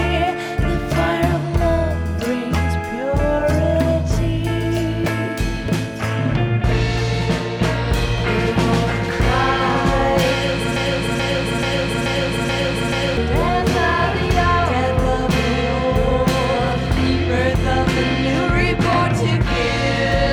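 At 10.76 s the sound catches on a short fragment, about 0.43 s long, and replays it exactly, back to back, six times until 13.17 s, a stuttering broken-record loop with identical repeats and no variation between them. This is likely a stall in the player, encoder or stream, which kept resending the last piece it held. Whatever should have played during those 2.4 seconds never arrives; the audio simply resumes afterwards with that stretch missing.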